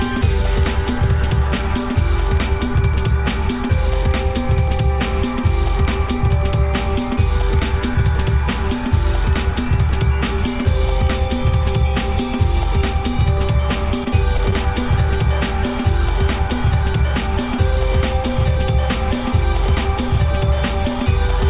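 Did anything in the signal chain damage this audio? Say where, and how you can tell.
Yes, at the network stage. Three short concealed packet losses fall close together, at 14.04 to 14.08 s, 14.38 to 14.41 s and 14.51 to 14.54 s. Each is a brief smear or wobble of about 30 to 35 ms. Each gap fits about 20 ms of audio arriving too late for the decoder. The receiver extended the preceding sound to fill it, then faded back into real audio. Above 4 kHz there is nothing, consistent with the G.711 A-law call path.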